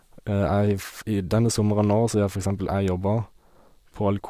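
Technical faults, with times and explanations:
No technical faults detected in this speech recording.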